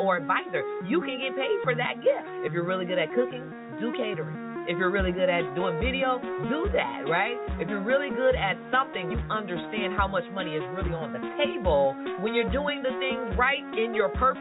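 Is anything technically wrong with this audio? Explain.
No, nothing's wrong here; the audio has simply come through an ordinary call path using G.711 A-law at 64 kbps, so there's nothing above 4 kHz, which is just what that kind of connection is meant to sound like.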